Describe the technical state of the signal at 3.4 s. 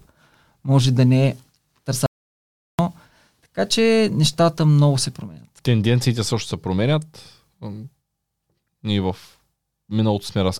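At 3.4 s the speech signal is intact, with no audible dropout, clipping, distortion or other technical fault.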